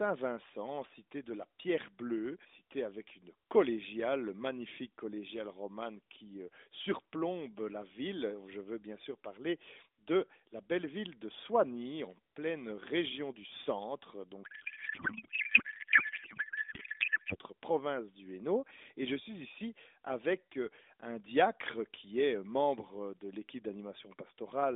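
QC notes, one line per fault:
14.44–17.37 s, codec payload misread: after "pleine région du centre" the speech turns to garbled warble that hardly tracks it until "province du". This fits octet-aligned AMR frames unpacked as bandwidth-efficient, and unlike packet loss there is no gap.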